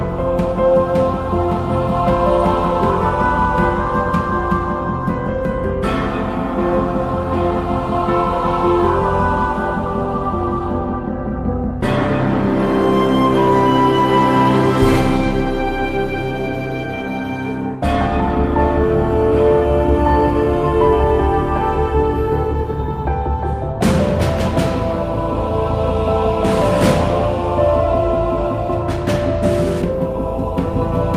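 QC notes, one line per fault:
No faults found.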